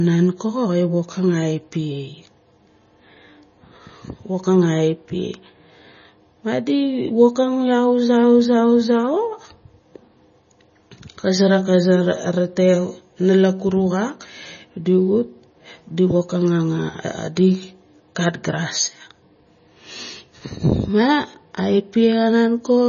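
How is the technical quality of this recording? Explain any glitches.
Quality's pretty rough. The whole speech clip carries heavy MP3 compression artefacts, likely from a low-bitrate encode, something around 24 kbps. Nothing sits above 6.9 kHz, and weak frequency lines flicker frame to frame, so the speech sounds watery and swirly, with chirpy s sounds and smeared attacks.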